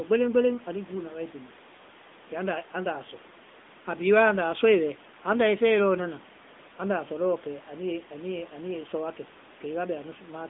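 AMR narrowband mobile codec damage affects this speech throughout: a 200 Hz to 3.6 kHz phone band and plainly buzzy, synthetic coding fitting a rate near 10 kbps.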